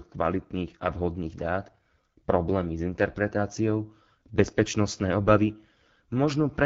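Speech heard throughout through the AMR wideband (HD Voice) codec, with plainly audible rough, raspy coding damage that points to one of its lowest rates, around 8.85 kbit/s. Unlike narrowband telephone coding, the band still reaches about 7 kHz, its top filled with hiss-like noise.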